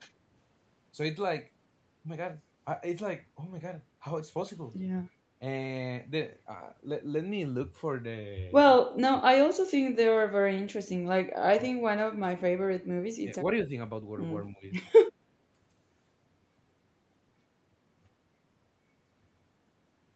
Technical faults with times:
8.80-9.51 speech suppressed in double talk
11.68-12.10 speech suppressed in double talk
13.20-13.37 speech suppressed in double talk
14.50-14.64 speech suppressed in double talk

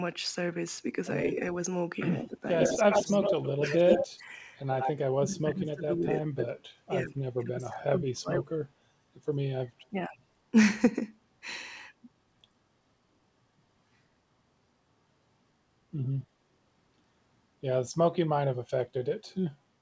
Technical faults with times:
2.18-2.45 speech suppressed in double talk
2.59-4.19 echo leak
2.76-3.86 speech suppressed in double talk
4.20-4.36 speech suppressed in double talk
4.68-4.91 echo leak
4.98-6.62 speech suppressed in double talk
7.01-8.57 speech suppressed in double talk
9.82-9.86 echo leak

